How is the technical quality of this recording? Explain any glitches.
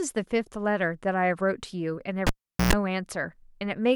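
The speech recording has one glitch, a cable pulled and plugged in, from 2.27 to 2.73 s. A pop cuts the sound to near silence for about 0.41 s. During that gap, about 0.11 s of 60 Hz mains buzz comes through as the plug's tip makes partial contact, and a second pop brings the sound back. That buzz and the paired pops set it apart from a plain dropout.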